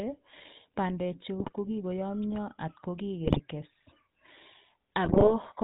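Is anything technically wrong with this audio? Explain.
Yes. Throughout, the speech carries GSM full-rate codec damage, consistent with a 13 kbps stream. Pulse-driven vocal-tract modelling gives a buzzy, gravelly roughness; a spectrogram shows nothing above 4 kHz.

GSM bit errors strike at 1.39–1.53 s, 3.24–3.41 s and 5.04–5.34 s. Corrupted filter, pitch and gain values cause squawks, pops and gargling, seen as level spikes and smeared spectral bands.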